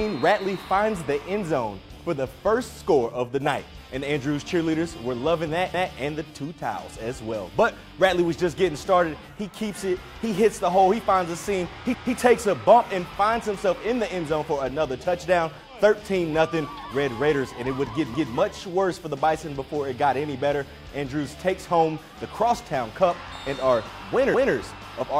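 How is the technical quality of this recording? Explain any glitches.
The recording has one recurring glitch: overlapping chunks at 5.74 s, 11.94 s, 18.14 s and 24.34 s. The audio was handled in 6-second blocks, and each new block begins 200 ms before the previous one finished, so that last fifth of a second is played twice at every join. Each time, 200 ms of sound repeats, heard as a brief stutter, recurring every 6.2 seconds throughout the clip.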